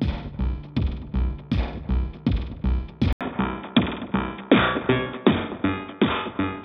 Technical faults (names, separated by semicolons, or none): input switched to a poorer device